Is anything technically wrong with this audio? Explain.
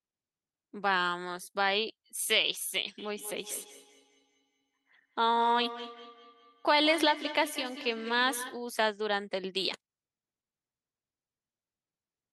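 Yes. From 2.98 s to 8.68 s there is feedback echo between two devices: one device replays the other's microphone, which picks it up again outside its echo canceller's reach. The speech returns about every fifth of a second, at its loudest about 12 dB below the speech. A spectrogram shows faint, regularly spaced copies trailing each syllable.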